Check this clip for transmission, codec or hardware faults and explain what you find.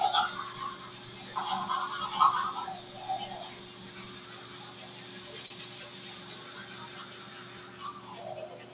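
Two faults are audible.

A noise suppressor applied to music or sounds runs through the whole clip. It was built for speech, so it treats steady tones, ambience and reverb as noise. Onsets pass, but sustained parts and tails are pulled down by around 10 dB. The sound pumps and thins.

A short stall from a late packet occurs from 5.46 to 5.52 s. A packet arrived late and the jitter buffer ran dry. The receiver stretched the last sound by 41 ms, then resumed where it stopped. Nothing is lost, but that moment hangs slightly too long.

The call path itself carries nothing above 4 kHz, which fits G.711 mu-law at 64 kbps.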